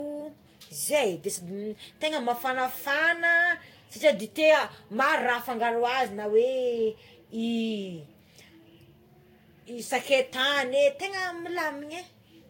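Generation loss runs through the whole speech clip. The sound is swirly and hollow, with a smeared, watery texture. Consonant attacks are blurred rather than crisp. Nothing is present above 16.6 kHz. The likely cause is repeated lossy re-encoding, about five passes. Each pass quantised the audio again on a shifted frame grid, so noise built up. The damage fits a Vorbis-style codec near 60 kbit/s.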